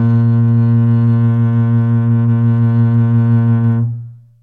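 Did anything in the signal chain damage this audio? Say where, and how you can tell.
No, nothing in this music stood out on listening as damage from any stage of the signal chain.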